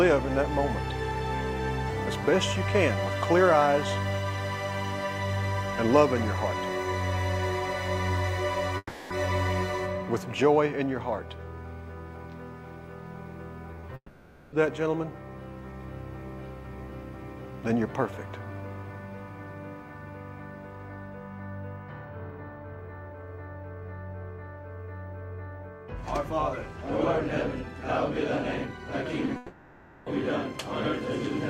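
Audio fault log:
8.77–9.11 s, long network dropout: About 330 ms of audio is lost. The receiver extends the last sound as a buzzy tail that fades, leaving roughly 40 ms of near-silence before the stream resumes further on. The cause is likely a network stall.
13.71–13.96 s, repeated packet loss (robotic sound): Six short gaps, none longer than 10 ms, fall within 250 ms. About a quarter of this stretch is concealment rather than real audio, so the sound turns choppy as each patch is quickly followed by another.
13.96–14.53 s, long network dropout: Straight after the choppy run, about 560 ms goes missing. The concealed tail decays into roughly 60 ms of silence, and the audio then rejoins without the lost section. The likely cause is the same link deteriorating into a full outage.
29.26–29.28 s, short concealed packet loss: A single 10 ms hole is patched by extrapolating the preceding sound and blending back into the real signal. 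It is heard as a brief smear or wobble rather than a gap.
29.36–30.07 s, long network dropout: About 700 ms is lost. Concealment covers the whole span with no silent stretch, so a fading buzz or hiss bridges the hole until the audio returns later in the stream. The cause is likely another network interruption.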